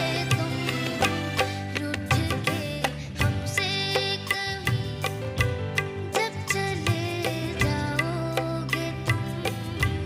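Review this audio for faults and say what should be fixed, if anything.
No faults found on review, so nothing here needs fixing.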